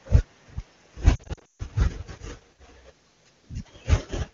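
From 1.16 to 1.62 s, lost AMR speech frames break the speech: about 280 ms is missing across 440 ms, with runs up to 140 ms. Concealment stretches the last pitch into a warble that fades quickly. Spectrograms show smeared harmonics decaying into blank gaps.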